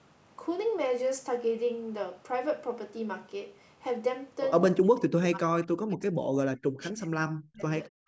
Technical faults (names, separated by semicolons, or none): speech suppressed in double talk; background gated by the echo canceller